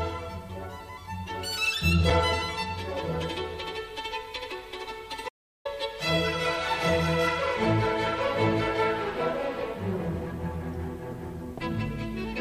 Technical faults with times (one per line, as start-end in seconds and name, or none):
5.29-5.65 audio dropout to silence